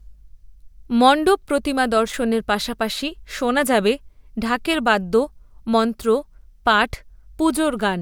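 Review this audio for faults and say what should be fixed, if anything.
Nothing here needs fixing; I listened through this speech recording and didn't hear any technical fault to address.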